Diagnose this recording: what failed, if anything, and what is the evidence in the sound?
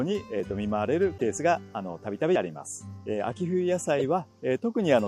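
Audio missing between chunks shows up as short skips at 0.40 s, 1.38 s and 2.36 s, close to one second apart. At each one, roughly 20 ms of sound vanishes and the two sides butt together with no gap of silence. That timing points to the driver or buffer stage, most likely a recorder handing over one-second blocks and losing a sliver at each changeover. Unlike a network dropout, these skips fall on a steady grid and leave no silence or concealment smear.

A corrupt frame decoded shows up as two brief bursts of misplaced energy, one from 1.17 to 1.22 s and one from 3.99 to 4.05 s. This is a codec-stage fault: damaged bits were decoded as if valid, throwing energy to wrong frequencies. The first burst spans about a couple of frames and the second a few. Unlike the chunk skips, these bursts follow no regular spacing.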